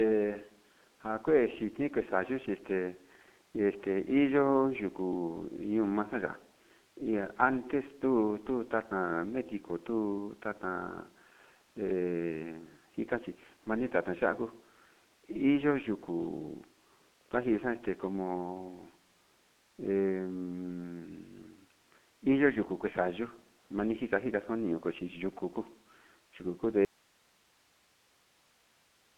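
G.723.1 codec damage runs through the whole recording. The speech passes through a telephone band of roughly 150 Hz to 3.4 kHz with nothing above 3.7 kHz, and the coarse 30 ms frame coding, consistent with a rate near 6.3 kbit/s, leaves it heavily muffled and hoarse, consonants smeared.

An audio dropout to a faint residue begins at 26.85 s and lasts to the end. The speech cuts off abruptly and only hiss remains, around 35 dB below the earlier level, likely because the source signal was lost while the path after the break stayed live.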